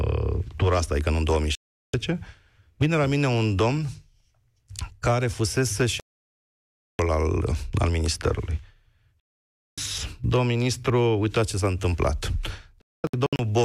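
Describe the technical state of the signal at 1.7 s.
The speech cuts or quickly fades to silence from 1.55 to 1.94 s. This is a digital broadcast dropout: the receiver muted on bad frames, and 0.38 s of programme is lost.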